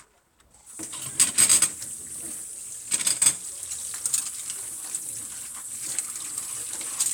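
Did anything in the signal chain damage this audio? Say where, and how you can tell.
No, nothing in the signal chain left any audible damage on this recording of sounds, and the signal stays continuous and intact throughout.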